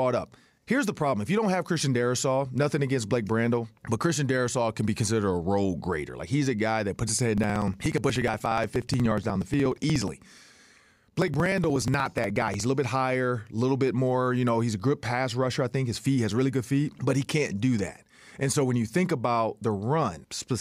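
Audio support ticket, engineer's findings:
Periodic USB or driver dropouts, 7.38–12.60 s. Regular ticks every 60 ms, around a hundred, each a few ms of audio skipped. Probable component: USB bus or audio driver blocked by a recurring background task. Strict spacing, signal-only ticks rule out random crackle.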